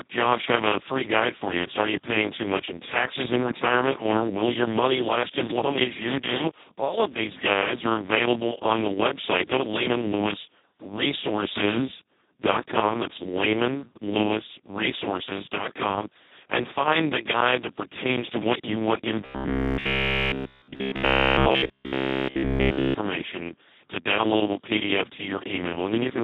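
Speex codec damage, heavy, throughout: starved of excitation bits, which fits a bitrate near 2 kbps, the speech turns hoarse and noisy.

Robotic sound from repeated short buffers, 19.26 to 22.96 s: a rigid 66.7 Hz metallic buzz covers the whole stretch, likely from a 15 ms chunk repeated while real audio was skipped.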